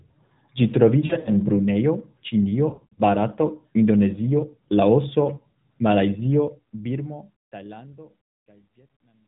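Speech over an AMR narrowband mobile link, band-limited below 4 kHz, with light coding that fits the 12.2 kbps mode. Lost AMR speech frames break the sound from 1.06 to 1.33 s and again from 2.70 to 3.02 s. The decoder stretches the last good pitch and vocal-tract settings with falling gain, so each stretch warbles and dips in scattered runs of up to 60 ms. A fade-out runs from about 6.27 s to the end at 9.28 s. From 6.27 s, truncation distortion on the fade adds grit as the level drops. It is worst from 8.18 to 9.28 s. This fits an undithered 12-bit volume stage.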